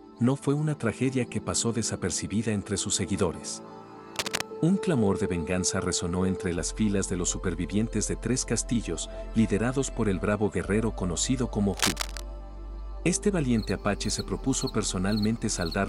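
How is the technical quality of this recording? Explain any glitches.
Two short bursts of cable scratch noise break into the recording, from 4.16 to 4.42 s and again from 11.74 to 12.23 s. Each is a dense, ragged rustle sitting only a few decibels below the sound itself. The likely cause is a worn lead, connector or control being moved, its contact resistance jumping about and injecting noise. Unlike isolated clicks or a clean dropout, the disturbance is continuous and irregular while it lasts.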